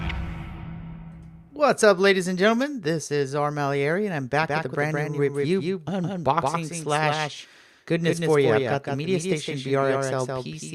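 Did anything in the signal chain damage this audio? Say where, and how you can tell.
Yes. From 4.42 s to the end, a doubled audio track appears, likely from a second, slower capture path feeding the same mix. A full-band copy trails by roughly 150 ms, about 5 dB down, with no decay or room colour, and it cuts in abruptly.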